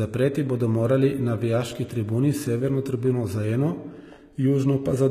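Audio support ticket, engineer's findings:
Gritty, metallic treble across the whole speech clip; s sounds lispy and smeared, sibilance bright but synthetic. Hard ceiling, nothing above 14.9 kHz. Likely HE-AAC compression at a low bitrate, sound points to roughly 20 kbps. Core codes lows only; spectral band replication copies lower bands upward under coarse envelope. Rebuilt harmonics misaligned at crossover. Damage plainly audible.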